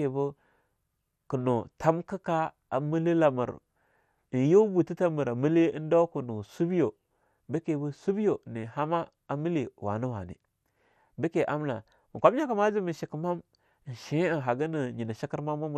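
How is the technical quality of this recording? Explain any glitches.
The recording is compromised by codec damage that runs through the whole clip. MP2 compression, present from start to finish, is the likely cause. The coder divides the speech into 32 sub-bands and, when bits are scarce, shuts off upper bands and quantises the rest coarsely, which fits a low rate near 80 kbps. The result sounds dull and muffled, with a gurgling, granular roughness as bands flicker in and out.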